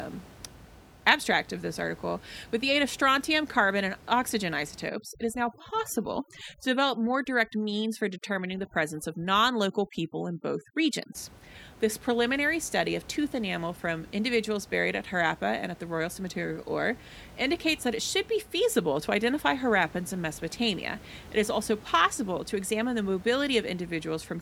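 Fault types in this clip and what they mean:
Overdone noise removal: from 4.88 to 11.15 s a denoiser set too aggressively cuts individual frequency bands whenever they sit near its noise estimate, so the background collapses into near silence with twinkling specks and quieter speech detail goes with it. On a spectrogram the room noise floor, normally about 22 dB below the speech, is replaced by dark gaps scattered with isolated bright dots. The speech harmonics look patchy and eaten away at their edges.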